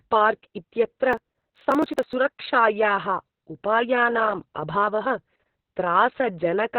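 Throughout, the speech sounds muffled, hoarse and faintly robotic, with nothing above about 4.3 kHz. This is heavy Opus voice compression. At 6 kbps the SILK coder works narrowband in 60 ms frames and renders the excitation only coarsely.

From 1.13 to 2.13 s a gritty, tearing crackle rides on the speech. This is processor overload crackle. Around forty of what sound like 10 ms buffers missed their deadlines and were skipped, and each dropout leaves a hard-edged gap until the load eases.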